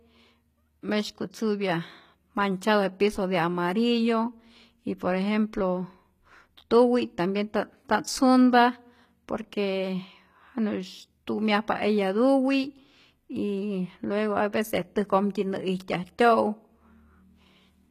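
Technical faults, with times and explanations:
Throughout: HE-AAC compression damage is plainly audible across the speech, and nothing sounds above 14.9 kHz. The likely cause is HE-AAC v2 coding at a low rate, which fits about 20 kbps. This coder keeps only the lower band as real signal. The treble is rebuilt by copying lower bands upward and shaping them with a coarse envelope. That upper region is bright but synthetic, so its harmonics don't line up with those below.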